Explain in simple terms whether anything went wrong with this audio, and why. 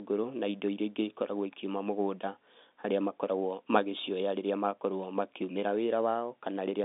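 Nothing went wrong here.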